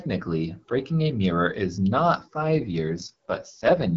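From 2.40 s to the end of the clip there is an AMR rate drop. Before it, the AMR wideband (HD Voice) coding sounds fairly clean, consistent with about 12.65 kbit/s. At 2.40 s the speech turns rough and raspy, which points to the codec switching down to its lowest mode, around 6.6 kbit/s. On a spectrogram the band and energy stay continuous, with no gap or edge, but the harmonics blur into noisy, smeared texture. The waveform shows no break.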